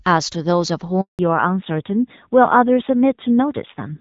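At 1.01 s the speech cuts off in a handover gap: the call is being moved between networks, and for 180 ms, until 1.19 s, no speech frames reach the decoder. The sound decays within a few tens of milliseconds and the line stays silent until the new link delivers audio, so whatever was said in that window is gone rather than delayed.

From 1.19 s to the end, the call shows a fallback to narrowband. Before the gap the audio has the extended top end of AMR wideband (HD Voice), with light coding damage consistent with around 12.65 kbit/s. After it, nothing above 4 kHz remains. The speech sounds duller and more muffled, and a rougher, buzzier texture appears that fits the narrowband AMR codec running at about 7.4 kbit/s.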